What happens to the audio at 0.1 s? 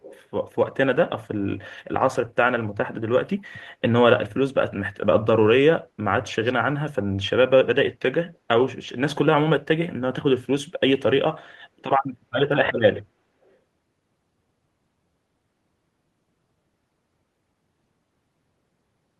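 An echo leak runs from 0.01 to 0.23 s: a faint copy of the speech returns about 338 ms late, likely from a far-end echo canceller failing to remove loudspeaker pickup.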